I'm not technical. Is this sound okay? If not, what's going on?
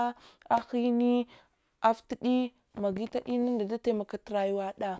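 Yes, this recording is okay. Nothing in it points to a technical fault.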